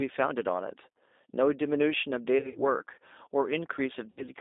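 G.729 codec throughout: the line is held to about 250 Hz to 3.7 kHz and the speech is rebuilt at 8 kbit/s from a pitch and filter model, sounding plainly rough and synthetic.

VoIP packet loss concealed by the speech codec at 2.39–2.60 s and 4.10–4.28 s: with packets missing, the decoder stretches its last pitch and filter into a buzzy tone or coloured noise that fades. The first gap is scattered and the second about 70 ms, with weakened speech lingering afterwards.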